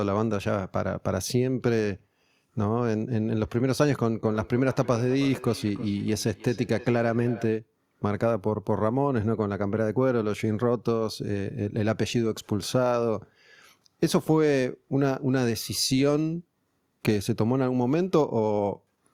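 From 4.25 to 7.62 s the speech carries a feedback echo between two devices: a second device in the room replays the call and the first device's microphone picks it up and resends it, which that device's echo canceller does not remove. Repeats return roughly every 0.3 s, about 18 dB below the speech, thinner and ringing.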